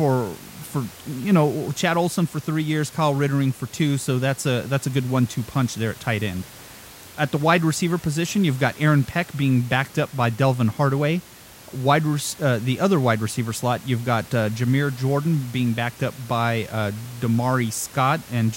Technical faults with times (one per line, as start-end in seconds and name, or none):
none